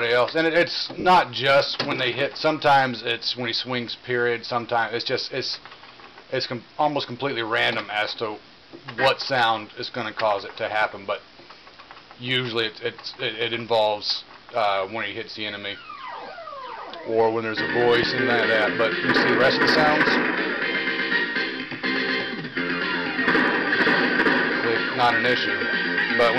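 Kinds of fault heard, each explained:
Lost LE Audio frames: Between 1.00 and 1.05 s, about 50 ms of the Bluetooth LE Audio stream, which fits five 10 ms frames, goes missing. The LC3 decoder fills the gap by repeating the last spectrum with scrambled phase, so the sound briefly turns into a hissy smear. A spectrogram shows clean lines blurring into broadband texture.
Loud pop: At 18.03 to 18.05 s a single sharp pop sits on top of the sound, which continues underneath. It is most likely a sudden voltage step, such as a switch, static or driver glitch. The waveform shows one isolated spike roughly 10 dB above the surrounding audio, and the spectrogram shows a thin vertical stripe.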